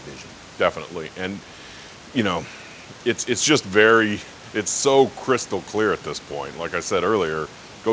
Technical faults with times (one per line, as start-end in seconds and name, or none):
none